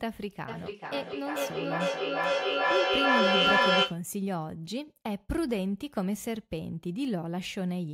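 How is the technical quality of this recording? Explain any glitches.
There's a clear problem here: a feedback echo between two devices runs from 0.48 to 4.06 s. Two devices in the same room are on the call, so one device's mic hears the other playing it back, and neither echo canceller catches it. The speech returns roughly every 400 ms, thinning and ringing more with each pass, and the repeats build up to about 7 dB above the speech rather than fading.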